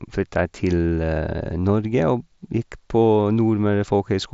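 The speech has no technical faults; it comes through a Bluetooth mSBC headset link that carries nothing above about 7.7 kHz and adds a light graininess of its own.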